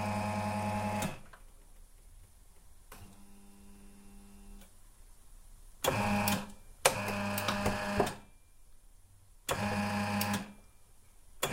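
No technical faults are audible.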